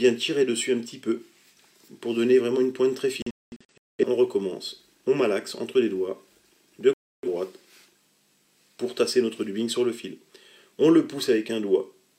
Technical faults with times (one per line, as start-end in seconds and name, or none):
3.22-4.04 digital broadcast dropout
6.93-7.28 digital broadcast dropout